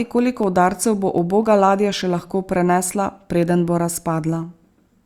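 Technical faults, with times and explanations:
0.19 to 4.93 s, periodic USB or driver dropouts: every 0.25 s, about twenty times in all, a sliver of the speech far shorter than a millisecond is skipped, so the waveform jumps abruptly where the samples on either side don't join. Each discontinuity is heard as an evenly spaced tick. On a spectrogram these appear as thin vertical broadband lines at regular intervals, sitting over the speech and missing from the pauses.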